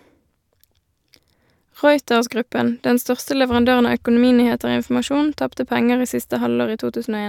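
No technical faults can be heard anywhere in the speech.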